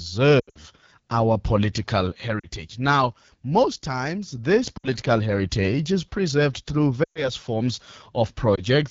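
It's a speech clip carried on the AMR wideband (HD Voice) codec, and the whole thing sounds rough and raspy, which fits the low 8.85 kbit/s mode rather than the clearer 12.65 kbit/s and up. The top end from 6.4 kHz up is shaped noise filling the band. On top of that there are lost AMR speech frames at 0.39 to 0.58 s (scattered across about 160 ms, just before "our political"), 2.39 to 2.47 s, 4.77 to 4.88 s (between "most times this" and "heritage is preserved through"), 7.03 to 7.29 s (after "heritage is preserved through"), and a single 20 ms dropout at 8.56 s. Each time, the decoder keeps repeating its last good pitch and vocal tract settings while the level sinks, so you hear a brief dip or warble or a quick drop to near silence, then a weak restart.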